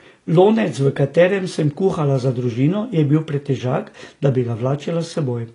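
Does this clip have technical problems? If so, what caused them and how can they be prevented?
Yes. Throughout the speech, nothing sounds above 10.5 kHz and sibilants are dull and fizzy. This is likely AAC compression at a low bitrate, consistent with roughly 32 kbps AAC-LC, where the encoder lowers its cut-off and quantises spectral detail coarsely. Encoding at a higher bitrate prevents this.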